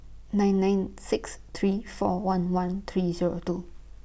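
No technical faults are audible anywhere in the speech.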